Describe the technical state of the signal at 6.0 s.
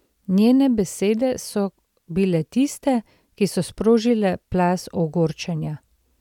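The signal is intact at 6.0 s, with no audible fault at that point in the speech.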